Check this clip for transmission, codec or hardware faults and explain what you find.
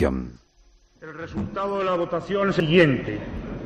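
One codec fault. At 2.6 s, compressed frames are skipped. About 150 ms of audio is lost, which fits two dropped 85.3 ms frames. The audio jumps ahead at that point.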